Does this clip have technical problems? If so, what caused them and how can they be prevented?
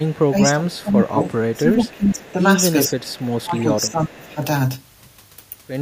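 Yes, there are two related problems here.

Echo leak shows up at 0.0 to 0.24 s, 0.78 to 0.83 s, 1.23 to 1.9 s, 2.98 to 3.37 s and 3.89 to 4.12 s: a faint copy of the speech trailing about 0.45 s behind, around 30 dB down (closer to 35 dB in the short 0.78 s scrap). The likely cause is a speakerphone on the far end whose echo canceller isn't fully scrubbing what its mic hears from its own loudspeaker, so that residue gets sent back. Using a headset there, or a device with better acoustic echo cancellation, would stop it.

Speech suppressed in double talk hits from 0.3 to 2.42 s and again from 2.88 to 4.42 s. The speech dips and pumps down by as much as around 20 dB, over roughly 2 s in the first stretch and about 1.5 s in the second. That's likely the echo canceller seeing both sides talking at once, failing to tell the local talker from the returning echo, and ducking everything. A canceller with proper double-talk detection, or simply a headset so there's no echo to fight, prevents it.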